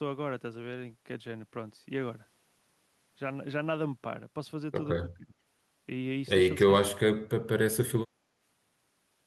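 From 5.03 to 5.36 s the talker's voice sinks by roughly 15 dB, and from 6.66 to 7.0 s it falls much further, by around 35 dB. This is speech suppressed in double talk. Both sides were likely talking at once, and the echo canceller, unable to separate the talker from the loudspeaker echo, turned everything down. Unlike plain background gating, it strikes the voice itself.

Between 8.07 and 8.36 s the room sound dips by about 8 dB for roughly a third of a second and then comes back. This is background gated by the echo canceller. While the loudspeaker was playing, the canceller clamped the microphone and released it afterwards. Only the ambient bed drops here, with a shallower, brief duck.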